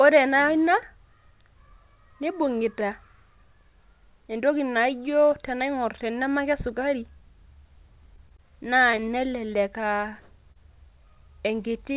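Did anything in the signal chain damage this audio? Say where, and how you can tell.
Yes. Network stage: repeated packet loss (robotic sound) from 8.16 to 9.04 s, six short holes, the longest about 18 ms, each patched by extending the last sound, so it goes choppy.

Also network: a short concealed packet loss at 10.52 s, about 20 ms missing, filled and crossfaded back in, so you hear a brief smear there. The G.711 call path itself just caps everything at 4 kHz.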